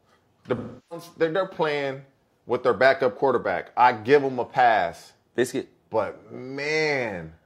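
From 0.57 to 1.06 s, just before "they're they're playing with", AAC frame loss with concealment replaces about 0.34 s of speech, roughly eight frames' worth, with a smeared, phasey wash built from the last good spectrum. On a spectrogram this appears as blurred, structureless energy.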